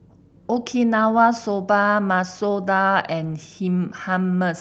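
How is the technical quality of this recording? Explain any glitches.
Nothing in the recording stood out as a technical problem on listening.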